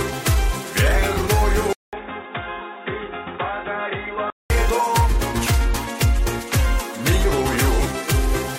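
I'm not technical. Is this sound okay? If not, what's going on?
No. There are two problems.

From 1.73 to 4.50 seconds, the sound turns dull and boxy. It likely comes from an input switched to a poorer device, such as a cheaper microphone or a headset. Nothing above about 3.8 kHz gets through, so the crisp upper detail is gone. The sound also drops noticeably in level, and a faint new background noise appears. There is a short silence of about 200 milliseconds at the switch. After 4.50 seconds the fuller sound returns.

At 7.79 seconds there is a tiny jump. This is compressed frames skipped. Compressed audio is stored in small blocks, each about 23 milliseconds long here. One block was missing or too damaged to play. So the sound jumps ahead by about 20 milliseconds.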